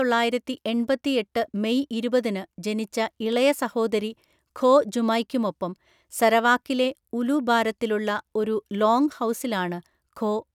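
No technical faults can be heard anywhere in the speech recording: the signal holds steady, with no break, distortion or disturbance at any point.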